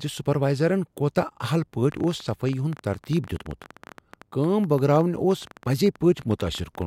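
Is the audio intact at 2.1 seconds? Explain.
No. A train of clicks runs from 1.92 to 6.83 s, about 12.5 unevenly spaced, same-shaped pops per second at roughly signal level, likely from interference, unlike random-shaped crackle.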